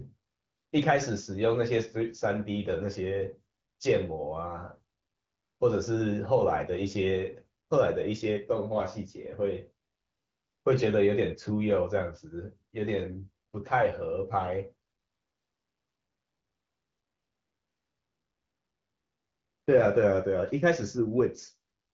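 No faults heard in this speech.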